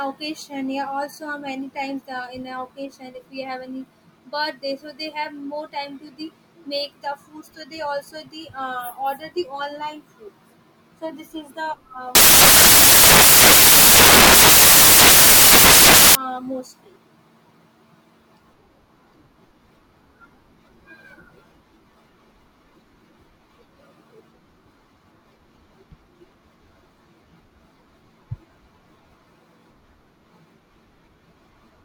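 Around 12.15 s to 16.15 s the speech turns into loud, harsh broadband noise: samples built from the wrong bytes, low-order bits landing in the high positions.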